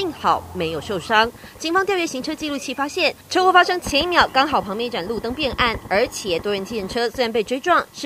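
No technical faults are audible anywhere in the clip.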